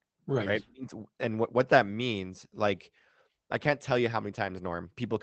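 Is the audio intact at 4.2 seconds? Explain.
No. At about 4.15 s, one lost packet was rebuilt from error correction. The next packet carried a low-bitrate copy of it, and the decoder played that instead. There is no gap, but those 20 ms sound rougher and noisier.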